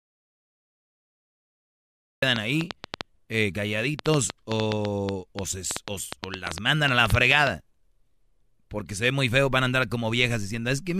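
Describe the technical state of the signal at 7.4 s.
At 7.4 s we're right at the tail of a train of clicks running 2.36 to 7.48 s: irregular ticks, about 5.9 per second, peaking roughly 20 dB over the speech, likely interference.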